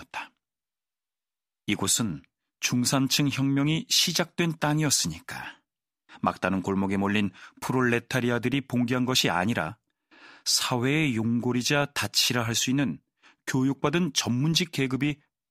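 Speech recording with no technical faults audible anywhere in the signal.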